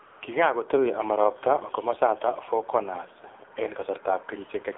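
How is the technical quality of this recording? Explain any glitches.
The technical quality is poor. The speech has passed through a low-rate mobile codec, and a short stretch near the start is synthetic fill.

AMR narrowband mobile codec, throughout: The AMR-NB coder rebuilds speech from a vocal-tract model and a few pulses per frame, which fits a low rate around 7.4 kbps. Everything outside roughly 200 Hz to 3.7 kHz is gone, and the damage is plainly audible: the speech sounds thin, buzzy and synthetic.

AMR comfort noise, 0.06 to 0.22 s: For about 160 ms, the sending side judged the talker silent and stopped transmitting speech frames. The receiver filled that gap with noise generated from a coarse level and spectrum description, so the real background there becomes a smooth, steady hiss that switches in and out.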